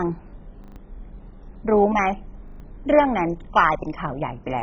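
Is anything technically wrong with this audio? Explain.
Yes. Throughout the speech the sound is dull and muffled, with a gurgling, granular roughness and nothing above 7.5 kHz. This is likely MP2 compression at a very low bitrate, around 16 kbps. The encoder starved the upper sub-bands and switched them off, and it quantised the remaining bands coarsely.

From 0.64 to 0.76 s and again from 2.48 to 2.6 s there is a quick, hard-edged stutter where one short piece sounds four times in a row. This is a repeated buffer. Fresh audio arrived late, so the last block, which fits a 40 ms buffer, was replayed, and about a tenth of a second of speech is missing.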